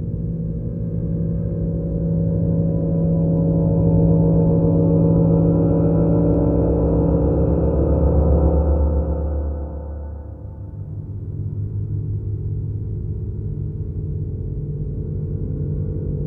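From 0.40 s right through to 16.24 s there are clock slip clicks, faint ticks about once a second, roughly fifteen in all. Each is a single sample dropped or repeated, likely because two unsynced clocks drift apart by around 20 ppm.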